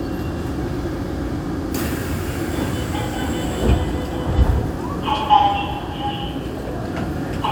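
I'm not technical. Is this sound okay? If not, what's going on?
Yes, this recording of sounds is fine. Nothing in it points to a technical problem that needs fixing.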